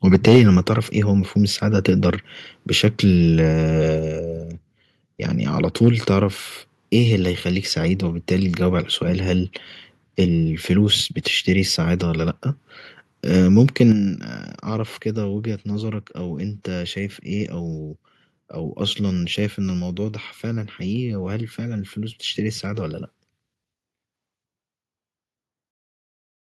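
The microphone input was likely set too high from the very start: between 0.13 and 0.45 s the signal runs about 6 dB past the converter's ceiling, so the tops of the loudest peaks are cut flat, a small but audible share of the samples, and the speech takes on a harsh, crackly edge. At 0.36 s, inside that distorted stretch, the call software likely reacted by lowering the device's input volume once, a microphone volume step-down of 2 dB, so voice and background drop together by a small, sudden amount. A second microphone overload follows from 5.83 to 5.89 s, likely from the same excessive input level, this time only about 1 dB over the limit, giving a brief gritty crackle on a peak. At 13.92 s the input volume is likely stepped down again, by 6 dB, and the whole sound, voice and room alike, abruptly becomes noticeably quieter.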